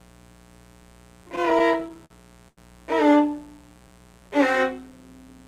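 A steady, raspy buzz sits under the audio throughout, about 30 dB below it. This is mains buzz: sharp switching spikes leaking in from a 60 Hz supply, with harmonics reaching into the kilohertz range.

From 1.23 to 2.12 s the sound drags and stutters through eleven brief holds, the longest 49 ms. About 147 ms of held sound fills roughly a sixth of that span. These repeated stalls (stutter) come from packets arriving late, so the jitter buffer kept running dry and the receiver extended the last sound each time.

At 2.48 to 2.59 s a single sound is held too long, by about 90 ms. This short stall from a late packet came when the buffer emptied and the receiver stretched the sound until the packet arrived, then resumed where it left off.

From 3.30 to 4.38 s the audio slows to about 87% speed at unchanged pitch, with drawn-out sounds. This is a jitter buffer slow-down: the receiver repeated pitch periods and pause fragments, adding about 146 ms to rebuild its reserve.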